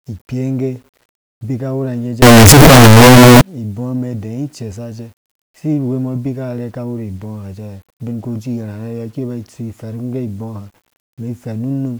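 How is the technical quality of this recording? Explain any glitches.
The technical quality breaks down in one stretch of this speech recording, from 2.22 to 3.41 s, where the sound turns into a loud, harsh, buzzing distortion and the quiet moments are as loud as the rest. The likely cause is signed and unsigned mixed up: in this 8-bit audio, flipping the top bit of each sample means every pass through zero jumps across the full range, so soft sounds come out as loud as strong ones.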